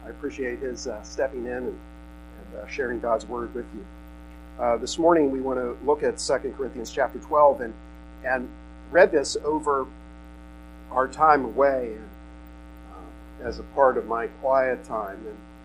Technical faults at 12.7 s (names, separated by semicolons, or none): none